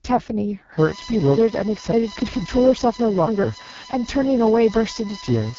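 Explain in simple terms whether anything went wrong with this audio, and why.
Two problems can be heard. The speech has passed through the AMR wideband (HD Voice) codec at a very low setting. This phone-call format rebuilds the voice from a simplified model of the throat and mouth, and at this level it sounds rough and raspy. Nothing above about 7.5 kHz survives.

From 0.79 s to the end there is also USB whine. Electrical noise from a USB connection leaks into the audio, adding a steady, fixed-pitch tone built on 1 kHz and loudest around 5 kHz. It sits under the speech.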